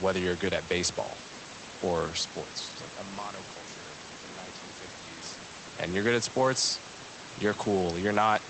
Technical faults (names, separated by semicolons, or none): none